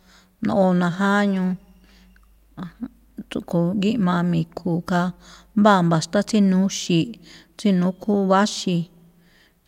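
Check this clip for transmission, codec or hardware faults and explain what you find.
No faults found here.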